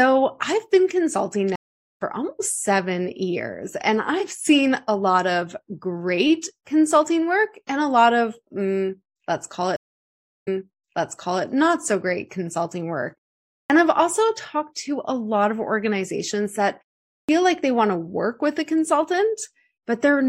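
At 1.56 to 2.02 s the stream connection dropped and the player restarted its decoder mid-stream. That stream reconnect is heard as about 423 ms of silence after "I've been consulting", with a jump of roughly a third of a second ahead before "almost seven". A second reconnect at 9.76 to 11.44 s gives 688 ms of silence, and the audio then resumes 993 ms earlier, repeating a second of speech.

The output device also drops into sleep during pauses and is slow to wake, causing a clipped start after a pause. After a 0.56 s pause, 43 ms is swallowed at 13.66 to 13.70 s, so "I've also talked to" begins abruptly. At 17.25 to 17.29 s, after a 0.5 s pause, 41 ms is lost and "like they want to" starts without its onset.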